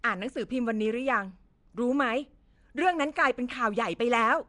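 From start to finish the speech carries a rough, hissy halo and a smeared, underwater quality, with nothing above about 10.6 kHz. The damage is plainly audible and points to Nellymoser compression, likely the Nellymoser Asao codec at a rate around 44 kbps. It spends a fixed, small number of bits per sample on short blocks, so weaker bands receive no bits and are filled in with noise. That substitution produces the grainy wash around the speech.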